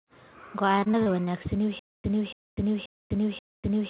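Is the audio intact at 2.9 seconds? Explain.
No. From 1.79 s to the end, a stutter with silent gaps is in progress: the stream likely stalled, replaying its last 284 ms fragment on each retry before running dry. The speech becomes one repeating burst, followed by about 248 ms of digital silence, every 532 ms.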